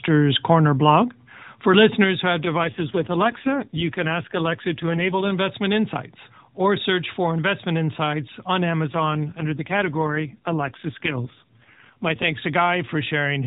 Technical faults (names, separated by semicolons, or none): AMR rate drop